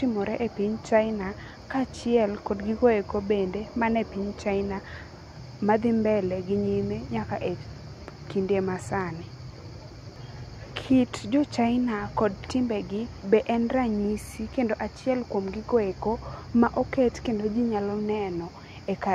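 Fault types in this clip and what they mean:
No faults detected on this speech track.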